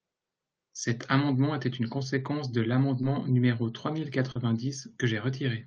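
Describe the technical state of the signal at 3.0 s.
At 3.01 to 3.05 s, right after "était une conséquence de", there is a short concealed packet loss: about 20 ms never arrived and the receiver extrapolated the preceding sound to fill it, giving a brief smear before "numéro trois mille". On a spectrogram it appears as a short stretch of repeated, slightly blurred harmonics or flattened noise, and the waveform shows a cycle-like repetition with a soft crossfade back.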